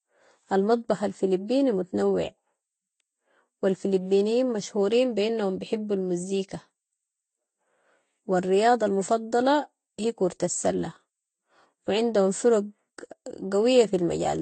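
Speech runs for the whole clip with a layered coding sound. Nothing is heard above 8.5 kHz. Two kinds of compression artefact sit together. This is likely transcoding between lossy codecs. The sound fits low-bitrate AAC followed by Vorbis, each adding its own damage.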